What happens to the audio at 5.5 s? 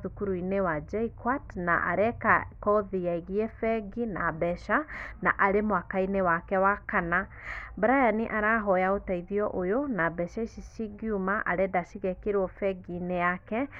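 Nothing goes wrong at 5.5 s: the speech runs on intact there, with no dropout, click, distortion or other audible fault.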